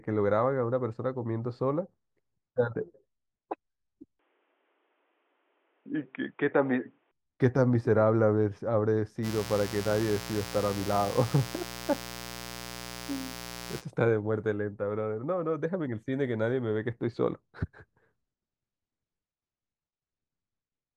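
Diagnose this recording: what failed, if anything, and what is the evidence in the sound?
From 4.19 to 7.11 s the speech loses everything above 3.7 kHz and gains faint noise around 45 dB down, at unchanged level: likely an input switched to a poorer device at the driver stage.

From 9.22 to 13.83 s a steady, raspy mains buzz sits about 15 dB below the speech: switching spikes in the analogue wiring, with harmonics of 60 Hz reaching into the kilohertz range.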